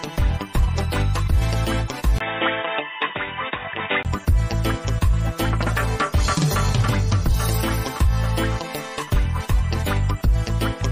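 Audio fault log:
2.18–4.05 s likely input switched to a poorer device: a 20 ms gap, then duller, quieter sound; spectrogram empty above 3.8 kHz, with a faint new noise floor.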